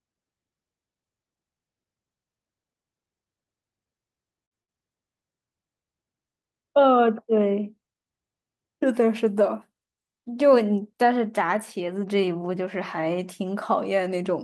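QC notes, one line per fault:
4.45–4.54 s and 4.63–4.71 s, burst of packet loss: two short runs of audio never arrived in time, so each time the receiver stretched the last sound for about 50 ms, fading it into a brief held buzz or hiss, then skipped ahead past about 60 ms of speech. On a spectrogram, each gap shows smeared, flat horizontal bands that dim, then a hard jump. The waveform shows a repetitive tapering stretch with an abrupt restart.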